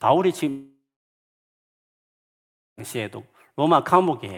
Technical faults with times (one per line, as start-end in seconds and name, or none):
0.49-2.80 long network dropout